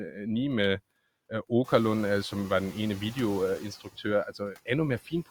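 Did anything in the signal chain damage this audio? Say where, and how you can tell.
Yes. At 0.64 s there's an electrical switching spike, a sharp snap laid over the sound. That's likely a nearby switch or static discharge arcing into the analogue wiring, with the line picking up the burst rather than the microphone.

Throughout, there are noise suppressor artifacts from the call processing stage. The background gets pulled down by about 17 dB between phrases and swells back under speech. It's most noticeable after the room noise itself climbs about 19 dB around 1.5 s.

Between 3.84 and 4.05 s you get speech cut by the noise suppressor. It misread part of the speech as noise and ducked it by up to about 18 dB, so roughly a tenth of a second of speech sounds swallowed and faint.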